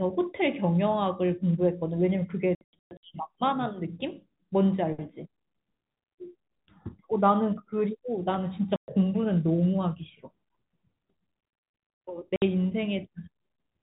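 The speech drops out through packet loss filled with silence: choppy holes from 2.55 to 3.03 s, then 8.76 and 12.36 s, hard-edged, fitting 30 ms packets, over the narrow G.711 telephone band.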